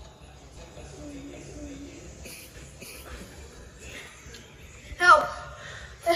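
A second, slower capture path or a misaligned edit likely mixed the same audio in twice, producing a doubled audio track from 0.56 to 3.24 s: a full-band copy trails about half a second behind at roughly equal loudness, with no decay, cutting in and out abruptly.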